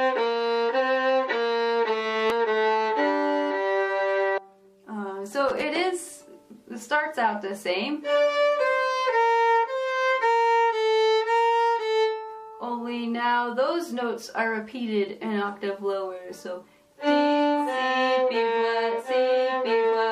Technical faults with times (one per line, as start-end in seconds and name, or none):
2.30 damaged data in a compressed stream
4.37 damaged data in a compressed stream
5.49-5.62 loose connector crackle